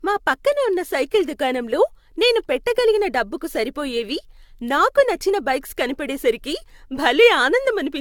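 Repeated lossy encoding, likely around seven passes through AAC-LC at about 96 kbit/s, has caused generation loss across the whole speech clip. Each pass requantises on a shifted frame grid, so the audio sounds swirly, smeared and hollow, consonant attacks blur, and nothing remains above 17 kHz.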